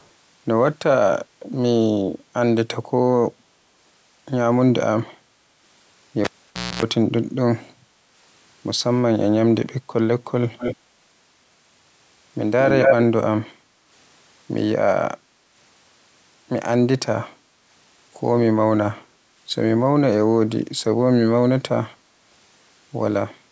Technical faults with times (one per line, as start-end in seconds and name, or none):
0.00-0.07 echo leak
6.24-6.83 cable pulled and plugged in
10.58-10.77 echo leak
12.61-12.96 echo leak
13.53-13.87 background gated by the echo canceller